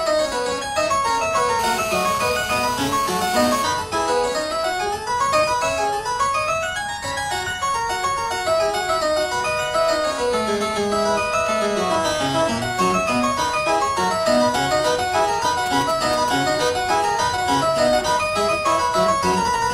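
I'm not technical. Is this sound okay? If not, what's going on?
No. A 2G mobile phone near the recording equipment interfered with it twice.

From 1.59 to 3.64 s there is GSM phone buzz. A phone on a call sends radio pulses 217 times a second, and the audio circuitry picked them up and turned them into sound. The result is a hard, raspy buzz at 217 Hz, rich in overtones, that has nothing to do with the recording itself and sits steadily on top of it for about two seconds.

From 15.66 to 16.30 s there are GSM signalling bursts. Here the phone wasn't on a call but sending short groups of radio pulses, the kind a phone exchanges with the network before a call or a text arrives. The circuitry picked these up the same way, so for just over half a second you hear a galloping dit-dit-dit of short 217 Hz buzzes rather than one steady tone.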